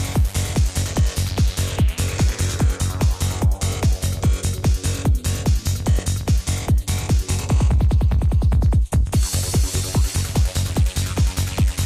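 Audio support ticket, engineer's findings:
Loud pop, single, 5.99–6.01 s, roughly 10 dB over the signal, audio carries on underneath. Likely a plug, switch or static discharge injecting a voltage spike.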